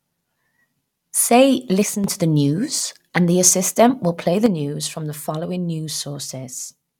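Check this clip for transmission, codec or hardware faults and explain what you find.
Two level drops stand out. One channel drops out from 1.83 to 2.04 s, just before "to the news and", and again from 4.46 s to the end, after "assistant will play the". Losing one stereo side is the likely cause. The mono sum falls abruptly by about 6 dB and recovers only after the first drop.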